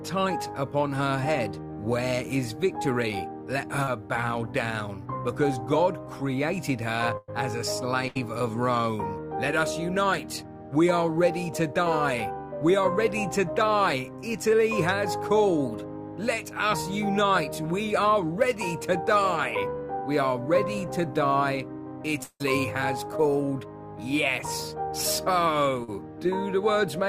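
At 3.83 s, short concealed packet loss: about 40 ms of audio failed to reach the decoder in time, and the receiver bridged the gap by extending the preceding sound for roughly 37 ms before blending back. It registers as a brief smear.

At 7.17 s and again at 8.08 s, a burst of packet loss removes about 100 ms and then 80 ms of audio. Each time the receiver carries the last sound forward and lets it fade. The first leaves a held buzz or hiss that dips to silence for about 10 ms before the audio resumes. Both times the audio picks up further on, with the lost stretch missing.

At 22.23 s, the cause is likely a long network dropout, with about 160 ms of audio never arriving. The last sound is stretched into a fading buzz or hiss lasting about 165 ms, including roughly 50 ms of silence, before the audio returns past the missing section.

At 25.84 s, another short concealed packet loss again drops about 40 ms, patched with roughly 38 ms of continued sound, leaving a momentary wobble.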